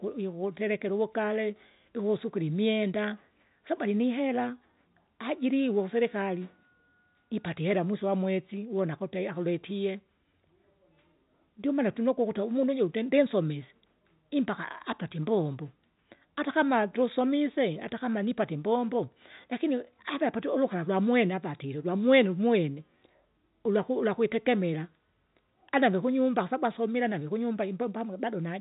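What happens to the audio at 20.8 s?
Nothing goes wrong at 20.8 s: the speech carries on intact through that moment, with the narrow telephone band of the G.711 coding heard as normal and no dropout, click or distortion.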